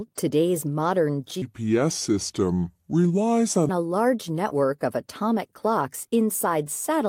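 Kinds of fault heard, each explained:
Section at the wrong speed: from 1.42 to 3.69 s, just after "today's modern", the speech turns deep and slow, playing at 0.7 times its proper rate and dropping roughly seven semitones. Speed and pitch move together, likely because that stretch was fitted to the wrong clock.
Short concealed packet loss: at about 4.50 to 4.53 s, just before "of atomic clocks inside", a brief smear lasts a few hundredths of a second. About 20 ms never reached the decoder, and 13 ms of it was filled by carrying the previous sound forward before blending back.
Lost packet rebuilt from error correction: in the same spot, 4.51 to 4.53 s, one 20 ms packet plays rougher and noisier rather than dropping out. The following packet carried a low-bitrate copy of it, and the decoder played that copy in place of the original.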